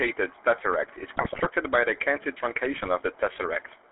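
A short speech recording passes through the GSM full-rate codec from start to finish. The band is confined to 300 Hz to 3.5 kHz, and the pulse-driven excitation gives the voice a plainly audible buzzy, gravelly roughness, consistent with the 13 kbps full-rate coder. On a spectrogram this appears as a hard ceiling at 3.5 kHz with grainy, smeared harmonics beneath it. GSM bit errors break in twice: from 1.14 to 1.47 s, between "tesseract is" and "by the", and again from 2.77 to 2.88 s. Corrupted filter, pitch and gain values turn the voice into squawks, pops and gargling. The waveform shows abrupt level jumps, and the spectrogram shows blocky patches of misplaced energy. The longer first burst points to around sixteen damaged frames.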